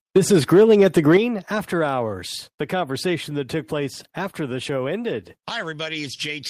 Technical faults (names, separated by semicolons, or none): microphone overload; microphone volume stepped down